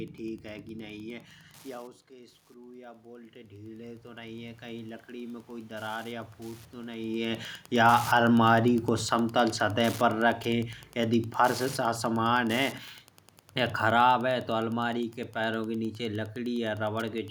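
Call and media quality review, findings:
Wi-Fi interference, whole clip: steady ticking about ten times per second, roughly 25 dB below the speech. Probable component: nearby Wi-Fi radio coupling into the microphone or preamp circuit, where its 102.4 ms beacon bursts are rectified into audible clicks.

Automatic gain rising, 2.07 to 5.5 s: speech and room noise swell together by about 14 dB. Probable component: AGC. Input dropped about 15 dB when the talker moved back near 1.5 s, and the gain ramped up over roughly 3.4 s to compensate.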